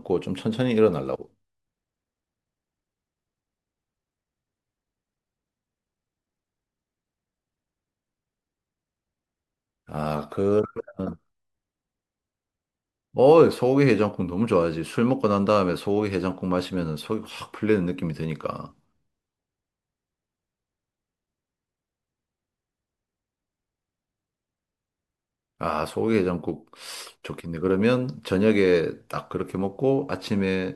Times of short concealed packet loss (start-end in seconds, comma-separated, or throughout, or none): none